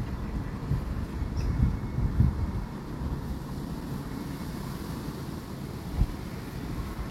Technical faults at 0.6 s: none

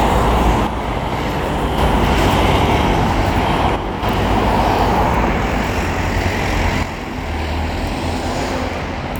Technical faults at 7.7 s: one channel drops out

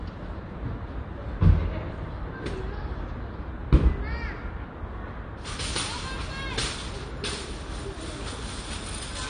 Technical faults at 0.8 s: AAC compression

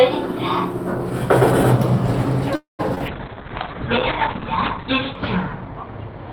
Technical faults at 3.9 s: call bitrate drop

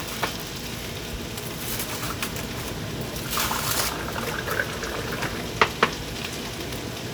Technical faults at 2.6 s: none

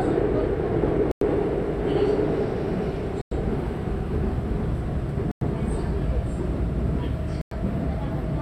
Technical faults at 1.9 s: none

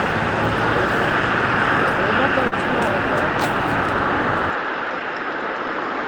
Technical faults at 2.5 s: short concealed packet loss

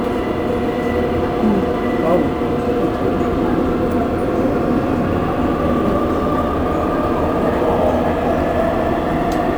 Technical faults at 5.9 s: sample clock jitter

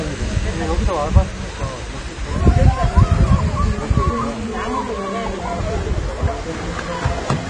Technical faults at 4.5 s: AAC compression

